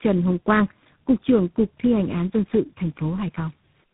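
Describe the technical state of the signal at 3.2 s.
At 3.2 s, as across the whole clip, the speech sounds rough, muffled and warbly, with nothing above 3.8 kHz. This points to tandem speech coding: roughly three low-rate speech codecs in series, each re-coding the last one's degraded output.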